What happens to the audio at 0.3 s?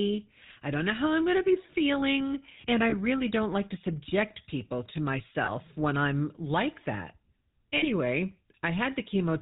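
At 0.3 s the speech is already under the GSM full-rate codec, which runs through the whole clip. The codec rebuilds the voice from a vocal-tract model fed by regularly spaced pulses. It keeps only every third excitation sample. Nothing above 4 kHz gets through, so the top end is gone. The damage is plainly audible as a buzzy, gravelly roughness. The heaviness of it fits a 13 kbps GSM full-rate stream.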